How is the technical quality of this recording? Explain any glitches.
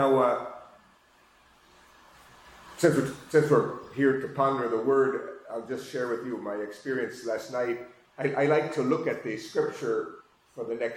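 The recording has one glitch, near the very end, from 10.20 to 10.22 s: damaged data in a compressed stream. A short stretch of the encoded file was corrupted, so the decoder misread those frames and lost sync until it found the next valid frame header. The result is a brief glitch lasting about 20 ms.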